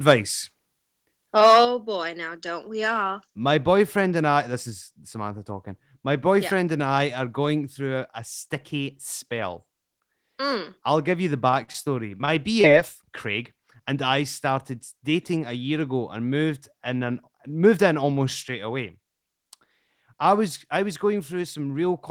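In this speech recording, at 1.65 s the whole signal, voice and background together, suddenly drops by about 6 dB and stays lower. The likely cause is the microphone volume being stepped down in one move by the call software reacting to an overly hot input. From 11.50 to 12.66 s, right after "I'll give you the", the voice turns choppy and robotic, with fragments missing. This is repeated packet loss. A rapid string of short gaps, the longest about 42 ms, was patched by stretching the preceding sound, covering roughly 17% of that stretch.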